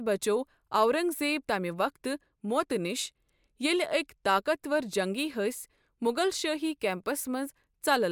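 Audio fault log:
Nothing stood out on listening to this speech clip.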